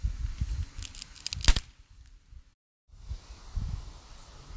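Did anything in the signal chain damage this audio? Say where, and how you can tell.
No, nothing in the signal chain audibly damaged this audio; no stage leaves a trace anywhere in the sound.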